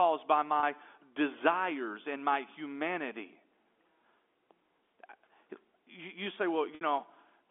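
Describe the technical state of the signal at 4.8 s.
At 4.8 s the speech is intact, with no fault, and it carries the narrow, telephone-band sound of G.711 coding working as normal.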